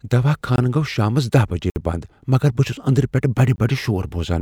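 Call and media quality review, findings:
Block of digital silence, three instances: output buffer not refilled in time, samples zeroed. Hard cuts at 0.56–0.58 s (20 ms, before "گو٘و شامس"), 1.70–1.76 s (60 ms, before "بند مگر بہٕ چُھس"), 3.56–3.58 s (20 ms, after "چُھس اندرٕ پیٹھہٕ بڈِ"). No fade: the 20 ms gaps land as short holes, the 60 ms gap as a longer hole in the speech. Probable component: playback/render buffer underrun.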